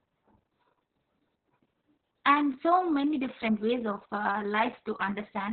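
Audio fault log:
throughout: Opus voice compression, and it's heavy. The speech is squeezed to narrowband with nothing above about 4.2 kHz, so it's muffled. The coarse SILK excitation coding makes it hoarse and a bit robotic, which fits a starved bitrate of around 6 kbps.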